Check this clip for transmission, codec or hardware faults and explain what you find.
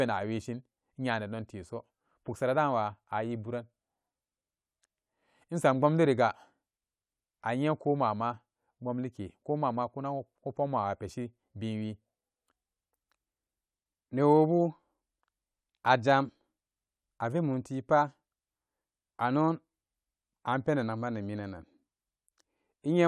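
Listening closely, I find nothing to flag in this speech recording. No part of it has a fault to describe.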